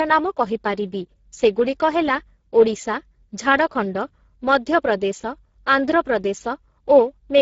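From start to finish the speech carries plainly audible Speex codec damage. This low-rate CELP coder has too few bits to describe the excitation accurately, so voiced sounds come out grainy and hoarse. The degree of damage fits a bitrate near 10 kbps. On a spectrogram, energy stops at a hard ceiling at 7.6 kHz, and the harmonic striations below it look blurred and noisy. The waveform shows no obvious gaps or clipping.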